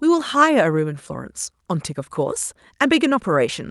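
Nothing is technically wrong with this speech recording.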